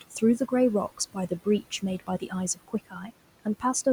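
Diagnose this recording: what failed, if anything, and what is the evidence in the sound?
Noise suppressor artifacts run through the whole clip, a call-processing fault. The room noise, about 19 dB below the speech, is pulled down by about 17 dB between phrases and swells back under them. Frame-by-frame band gating leaves a residue.

Speech cut by the noise suppressor occurs at 0.89–1.83 s, 1.99–2.33 s and 2.9–3.11 s, also in call processing. Quiet speech components in each span, roughly a tenth of a second or a little more in total, were classed as noise and dropped by up to about 17, 15 and 14 dB, so they sound swallowed.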